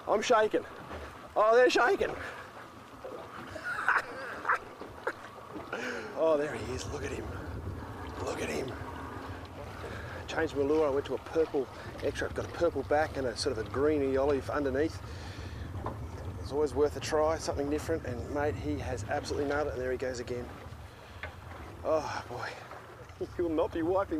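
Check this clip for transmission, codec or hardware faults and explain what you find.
Nothing in the recording points to a transmission, codec or hardware fault. No event anywhere along the clip calls for explanation.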